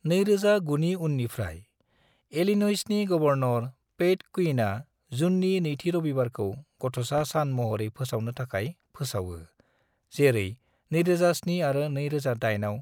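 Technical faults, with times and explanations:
7.18 to 7.22 s, loud pop: One sharp pop lands on the speech, peaking a few decibels above it. The speech continues underneath. A sudden voltage pulse, likely from a plug, switch or static, entered the signal path. Later circuits shaped it into this brief thump.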